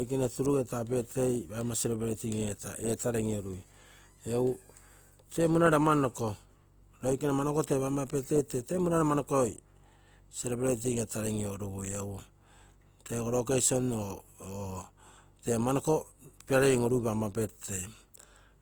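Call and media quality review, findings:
Opus compression, throughout. Speech is grainy and rough, noisy rather than swirly. Band energy is held while starved bands are filled with folded or noise content. Full bandwidth is kept, with content up to 20.1 kHz. Likely Opus CELT mode, fitting roughly 24 kbps.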